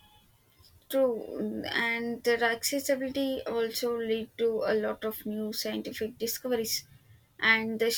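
There are no technical faults to describe in time order anywhere in the recording.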